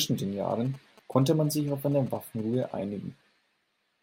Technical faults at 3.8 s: none

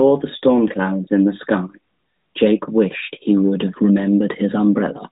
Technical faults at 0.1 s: none

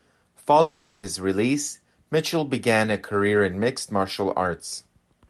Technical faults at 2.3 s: none

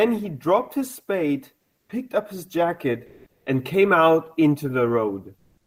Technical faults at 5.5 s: comfort noise in place of the background

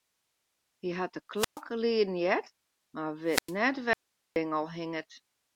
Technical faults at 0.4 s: none

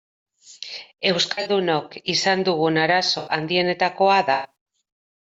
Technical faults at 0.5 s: none

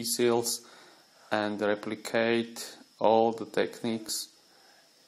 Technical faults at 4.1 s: overlap between stream segments

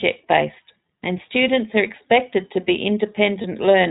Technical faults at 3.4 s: iLBC codec; lost iLBC frames

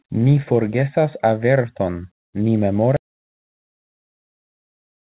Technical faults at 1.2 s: none

